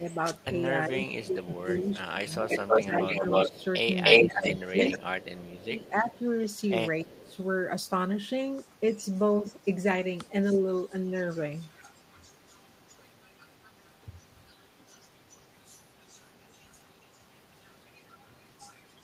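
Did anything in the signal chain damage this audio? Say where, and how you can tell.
Yes. From 0.11 to 7.36 s a delayed copy of the speech trails it by 304 ms, about 5 dB louder than the original. From 8.93 s to the end a much fainter copy follows at 390 ms. This is echo leak in call processing, likely a far-end loudspeaker whose echo canceller left some of its microphone pickup in the return signal.

Between 0.00 and 7.37 s the speech repeatedly dips, the deepest drops about 15 dB, totalling around three seconds. A brief, shallow dip of about 5 dB follows between 8.96 and 10.64 s. This is speech suppressed in double talk, likely an echo canceller that couldn't separate talker from echo while both sides spoke and so attenuated everything.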